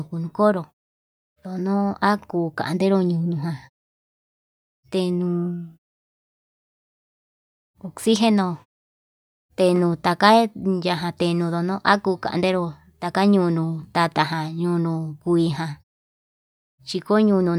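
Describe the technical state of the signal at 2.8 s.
At 2.8 s the speech signal is intact, with no fault present.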